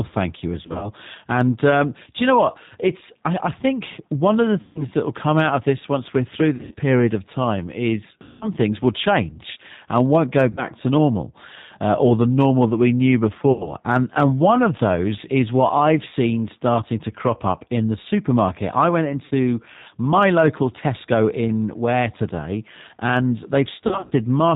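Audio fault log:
Throughout: G.729 codec. The whole clip has gone through the 8 kbit/s G.729A coder, and the damage is plainly audible. Everything above 4 kHz is gone, so the speech sounds narrow and boxed-in. Each 10 ms frame is rebuilt from a vocal tract filter, a pitch predictor and a handful of pulses rather than the real waveform, which gives the voice a slightly rough, synthetic buzz.
0.63–0.91, 4.61–4.83, 6.55–6.75, 8.23–8.47, 10.51–10.65, 13.52–13.75, 19.25–19.33 and 23.87–24.13 s: VoIP packet loss concealed by the speech codec. Audio drops out in bursts of 60 to 180 ms. In some bursts the gaps are scattered, for example right after "thank you" and near the end. The decoder fills each hole by stretching its last pitch and filter, so you hear a fading buzzy tone or coloured noise, such as between "change and won't go" and "to normal uh or", or after "normal that we knew". Recovery lags for a moment once packets return.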